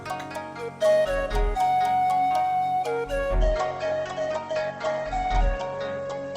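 From 3.39 s onward, treble vanishes above 8.2 kHz and artefacts thicken abruptly without a gap: an adaptive stream at a lower bitrate, fitting 16 kbit/s Opus.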